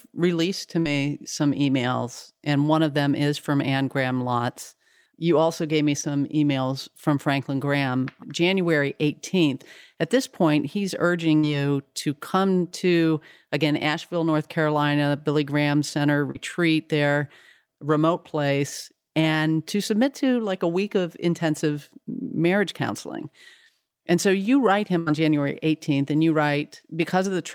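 At 0.79 to 0.87 s there is a burst of packet loss. About 60 ms of speech never arrived in time. The receiver stretched the last sound and faded it. Then speech resumes with that stretch gone. At 6.01 s a short concealed packet loss fills a 20 ms hole with a continuation of the preceding sound. It is heard as a brief smear before the real audio blends back. The burst recurs at 11.37 to 11.45 s, again losing 60 ms. A 40 ms concealed loss smears 16.31 to 16.37 s. A final burst at 24.99 to 25.08 s drops 80 ms, the longest held and fading gap.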